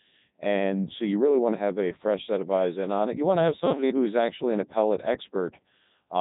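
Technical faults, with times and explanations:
Throughout, Codec 2 vocoder: the speech is resynthesised as sine waves from only pitch, voicing and a coarse envelope, hence the robotic buzz, consistent with its 3.2 kbit/s mode. A spectrogram shows rigid harmonic stripes stopping at 3.8 kHz, with no original waveform detail preserved.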